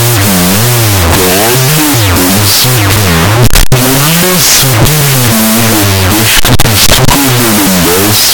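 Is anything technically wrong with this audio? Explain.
Yes. Throughout the clip there is a wrong sample width fault: 16-bit audio is being read as unsigned 8-bit. Each byte becomes its own sample, so the speech plays at half speed, an octave low, buried under loud hiss from the low bytes.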